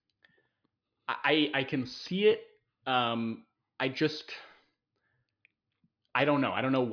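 Nothing in the speech recording points to any technical fault along its signal path.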